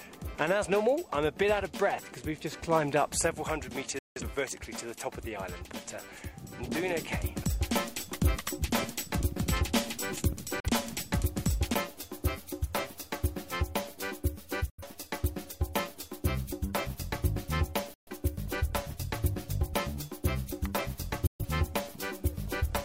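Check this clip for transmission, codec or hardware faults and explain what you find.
Five digital broadcast dropouts occur, at 3.99, 10.60, 14.70, 17.94 and 21.27 s. At each point the receiver lost valid frames and muted until good ones returned, so that stretch of audio is simply gone. The sound cuts out over a fade of about 3 ms and then comes back. The holes last about 171, 43, 85, 128 and 128 ms. Every length is a multiple of roughly 43 ms, which points to whole frames of that duration being discarded.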